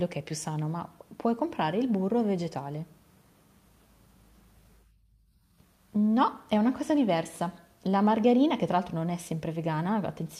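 Nothing stood out on listening to the speech in this recording.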